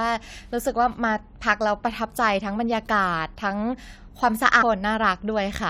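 At 4.61 to 4.63 s the speech jumps abruptly forward with a brief blip. Part of the programme is gone. This is likely a stream segment skipped: one segment failed to load, and the player moved to the next.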